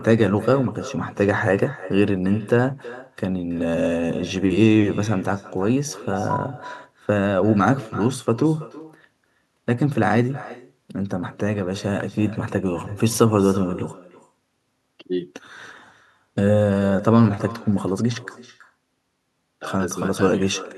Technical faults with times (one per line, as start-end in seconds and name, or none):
0.00-20.78 echo with no canceller